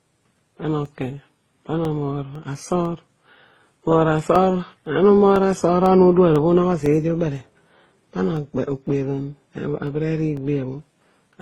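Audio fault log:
throughout: transcoding between lossy codecs. The speech carries a layered mix of artefacts from different codecs heard at once, which points to the audio having likely passed through several lossy codecs in a row, ending in something like Opus. Each stage encoded the previous stage's damage along with the signal and added its own, and the band stops at 12 kHz, the lowest cut-off reached along the way.
0.35 to 10.88 s: periodic USB or driver dropouts. A steady tick recurs every 0.5 s across this span, about twenty in all, heard only where speech is present. Each one is a brief gap of roughly a millisecond where the signal drops to silence, consistent with a background task stalling the USB bus or audio driver on a fixed schedule. The abrupt jump to silence and back produces the click, and the strict spacing gives it its mechanical regularity.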